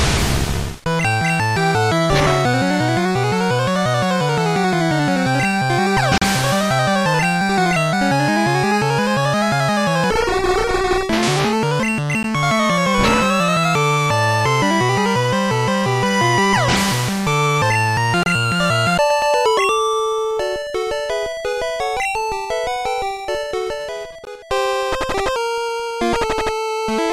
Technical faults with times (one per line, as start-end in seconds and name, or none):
6.18-6.22 gap between stream segments
12.23 gap between stream segments
18.23-18.26 gap between stream segments
24.25 gap between stream segments